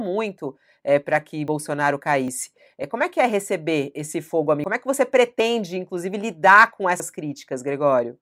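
The speech jumps forward at 1.48 s and again at 2.28 s, each skipping about 40 ms. A longer jump of roughly 70 ms follows at 4.64 s, just after "é receber esse fogo". Another 40 ms skip at 5.4 s lands just before "inclusive lidar com", and a 70 ms one at 7.0 s comes right after that phrase. There is no gap at any of these points. The likely cause is a dropped buffer (overrun): audio was overwritten before it was read, and the surrounding sound was spliced together.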